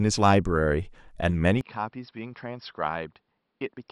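At 1.61 s the speech abruptly changes character and stays that way to the end of the clip. Energy above about 5.5 kHz disappears, so sibilants and airiness go missing and the sound turns dull and boxy. The level falls by roughly 10 dB, and a faint new noise floor appears well beneath the speech. The change happens with no gap at all. This most likely reflects an input switched to a poorer device during recording.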